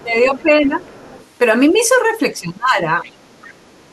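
A speech clip with echo-canceller trouble. Speech suppressed in double talk occurs at 0.01 to 0.47 s, 0.65 to 0.74 s and 2.39 to 3.06 s. The voice dips by roughly 10, 5 and then about 20 dB. The likely cause is an echo canceller that ducks everything when both sides talk. The other side's voice leaking through is faint, around 20 to 30 dB down, at 0.24 to 0.42 s, 0.82 to 1.26 s, and 3.05 s to the end. It is likely loudspeaker echo left in the microphone signal.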